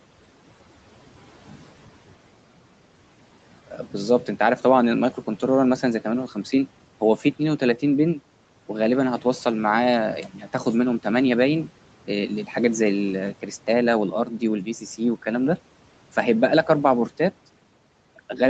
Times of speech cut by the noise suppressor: 14.65-15.00

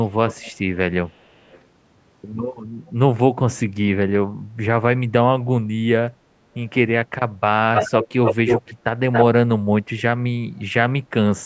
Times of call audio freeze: none

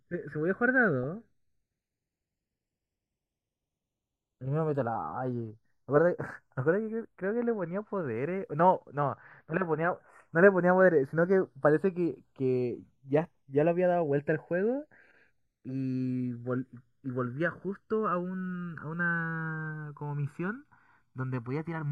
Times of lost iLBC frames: none

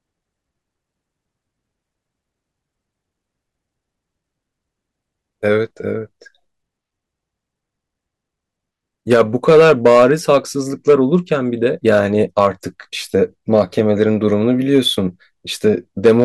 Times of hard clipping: 9.12-10.37, 10.89-11.16, 12.39-12.47, 13.16-14.03, 14.75-14.78, 16.05-16.24

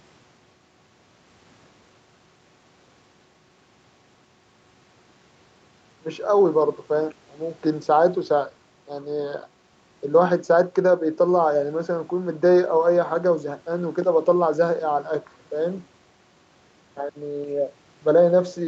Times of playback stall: none

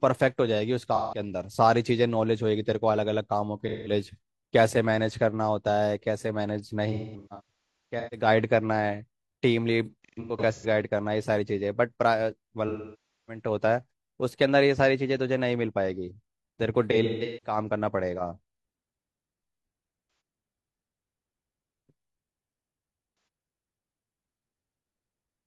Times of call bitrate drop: none

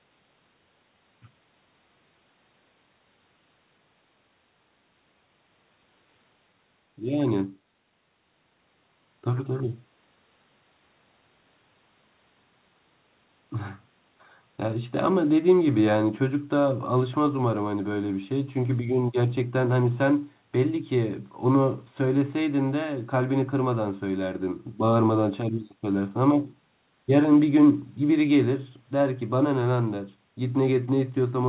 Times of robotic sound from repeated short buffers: none

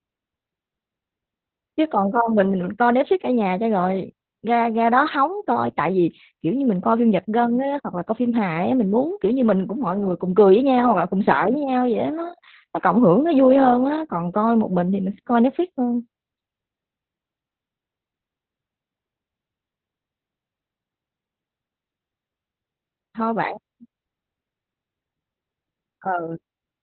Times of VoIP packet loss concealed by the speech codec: none

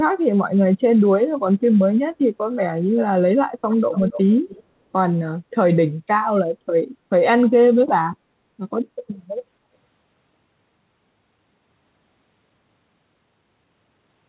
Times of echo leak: 3.71-4.23, 4.49-4.63

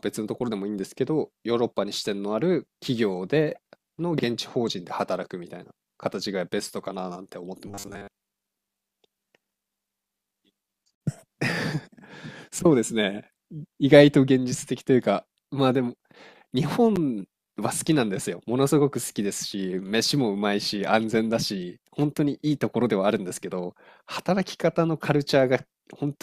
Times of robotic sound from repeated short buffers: 7.68-8.08

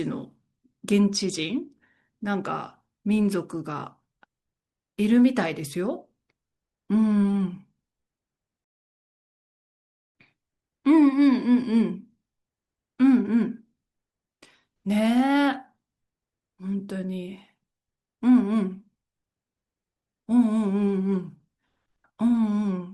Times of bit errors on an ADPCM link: none

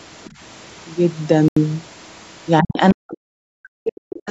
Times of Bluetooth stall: 1.48-1.57

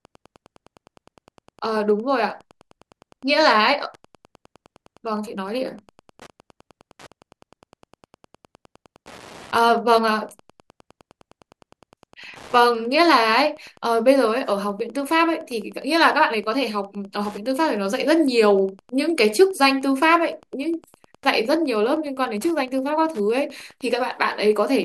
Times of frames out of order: none

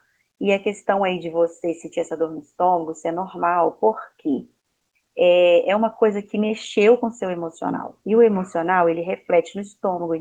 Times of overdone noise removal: none

